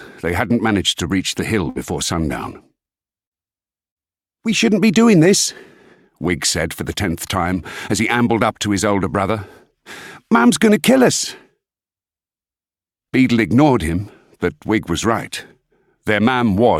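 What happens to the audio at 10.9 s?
Nothing goes wrong at 10.9 s: the audio plays through that moment intact, with no dropout, glitch or distortion.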